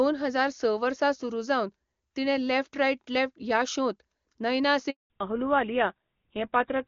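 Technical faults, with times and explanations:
4.90–5.10 s, handover gap: The call was passed from one network to another, and for about 200 ms no speech frames reached the receiving end. The speech fades out within a few tens of milliseconds and the line then sits silent until the new link begins carrying audio. Whatever was said in that fifth of a second is gone, leaving a clean hole in the speech.
5.10–6.88 s, fallback to narrowband: After the switch, the call dropped from HD Voice to an older narrowband codec. Up to this point the speech has the full wideband range expected of AMR-WB at a high rate, with little or no audible coding damage. From here on, nothing above 4 kHz remains. Sibilants lose their edge and the airy top of the speech vanishes, and the older coding makes the speech sound duller and rougher, consistent with a GSM full-rate link.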